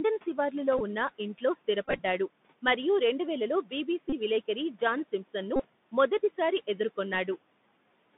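A speech clip heard through a Bluetooth CVSD headset codec for its whole length. The band runs only from about 150 Hz to 3.6 kHz, so it sounds thin and muffled. This one-bit delta coder, which fits a 64 kbps link, cannot track fast, loud high content. S sounds turn scratchy, and a grainy hiss sits under the speech. Room noise lies about 22 dB below the voice. Bluetooth headset packet repeats break in four times. The first comes at 0.78 to 0.81 s. The worst is a scattered run from 1.85 to 2.00 s, with about 83 ms lost in total. Shorter bursts follow at 4.10 to 4.13 s and 5.56 to 5.65 s. Each time, lost packets were replaced by replaying the last good one. The 3.75 ms repeat gives a short buzz near 267 Hz.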